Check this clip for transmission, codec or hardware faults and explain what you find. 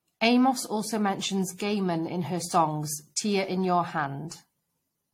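There is one codec fault, and it runs through the whole speech clip. Generation loss: the audio sounds swirly, hollow and smeared. Consonant attacks blur. Nothing is heard above 16.5 kHz. The likely cause is about five repeated lossy encodes, consistent with AAC-LC near 64 kbit/s. Each pass re-quantises on a shifted frame grid, so noise and spectral holes accumulate.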